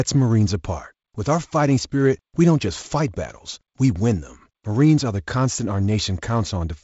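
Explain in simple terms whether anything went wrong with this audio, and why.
Nothing went wrong with this audio; the light softening you might notice is simply the normal sound of wideband telephone coding.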